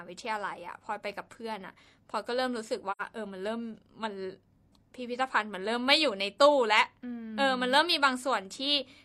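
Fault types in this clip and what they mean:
AAC frame loss with muting: in this speech clip, the decoder received no data for a stretch and filled it with zeroed spectrum, so the sound drops out between 2.91 and 3.02 s. About 85 ms of audio is missing, which fits two lost frames. Because neighbouring frames overlap and are windowed, the level fades down into the hole and back up out of it over roughly a frame's length, giving a soft-edged dropout.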